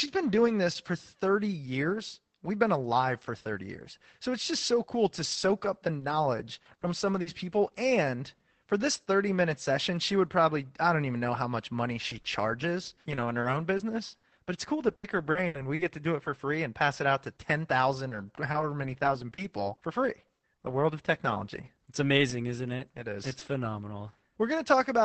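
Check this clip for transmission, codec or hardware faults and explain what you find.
Yes, there are a few network-loss problems here, all sitting on top of an Opus call path whose audio tops out around 8 kHz.

From 5.23 to 7.27 s there are scattered short gaps: a handful of missing packets, each patched by stretching the last bit of sound, so you hear brief ticks and smears of up to about 40 ms.

The same scattered short gaps come back from 17.95 to 23.43 s. There are about ten tiny holes, each roughly 20 ms.

From 12.09 to 15.81 s you get repeated packet loss with a robotic sound. There are over a dozen dropouts in quick succession, with the longest at 80 ms. The constant patching makes the speech choppy and robotic, with chunks missing.

At 16.25 s there's a lost packet rebuilt from error correction. The next packet carried a low-rate backup copy, so there's no gap, just a momentary rougher, noisier patch.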